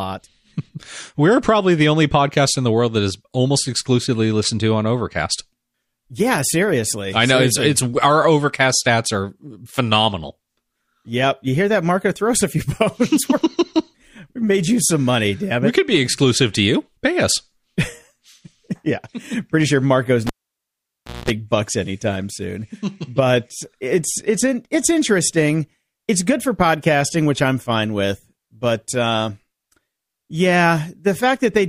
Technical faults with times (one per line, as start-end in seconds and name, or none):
20.27-21.30 cable pulled and plugged in